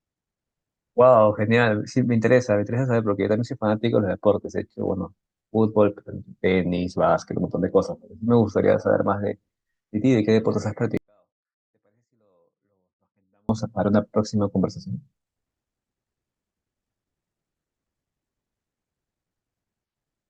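A speech clip with a 24-bit alignment error (too quiet) from 10.97 to 13.49 s: 24-bit samples sitting in the low bytes of 32-bit words were read as full 32-bit values, dropping the level by about 48 dB. Unlike a fade or dropout, the change is instant and the faint audio stays clean and undistorted.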